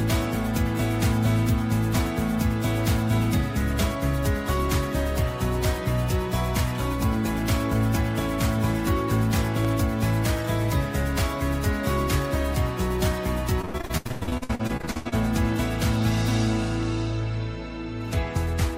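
At 9.65 to 9.67 s a loud pop, likely an electrical transient, stands about 10 dB above the sound, showing as a thin waveform spike and a vertical spectrogram stripe. From 13.61 to 15.14 s, repeated packet loss (robotic sound) leaves 20 gaps, up to 96 ms long, patched by repeating earlier audio. This sounds choppy, with pieces missing, and shows smeared, repeating spectrogram blocks.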